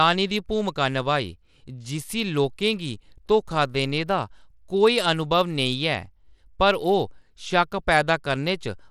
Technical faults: Bluetooth SBC compression

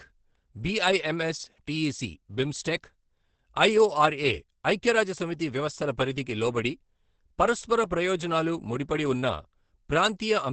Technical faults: Opus compression

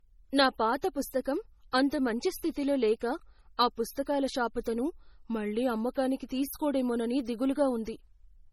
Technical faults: low-bitrate audio saved at a high bitrate

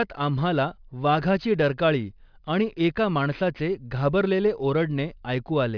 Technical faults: aliasing

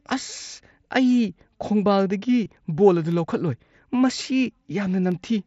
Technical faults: concealed Bluetooth headset packet loss; periodic USB or driver dropouts

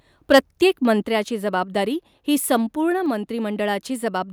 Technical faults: microphone overload; microphone volume stepped down

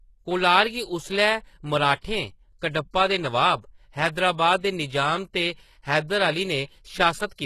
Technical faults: HE-AAC compression; pre-echo

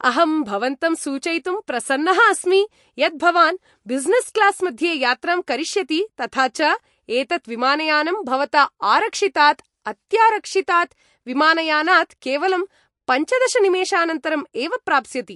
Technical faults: MP3 compression

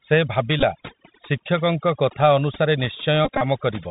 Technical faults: overdone noise removal; Bluetooth CVSD headset codec; Bluetooth headset packet repeated

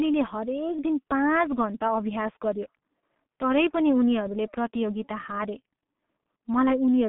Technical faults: G.723.1 codec

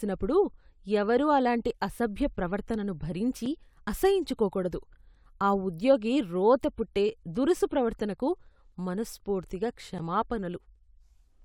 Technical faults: block of digital silence

